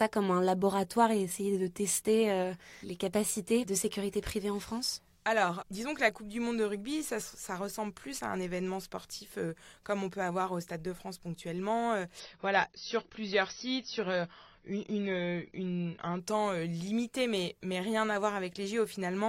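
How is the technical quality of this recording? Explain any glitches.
The speech has one clear glitch, from 12.2 to 16.2 s, starting just before "temps euh limité mais". The sound turns dull, with nothing above 6 kHz and more codec artefacts, then snaps back with no gap. This is an adaptive stream at a lower bitrate: the connection slowed, so the player switched to a cheaper version, which fits a drop from 96 to 24 kbit/s AAC, and the encoder discarded the treble to fit.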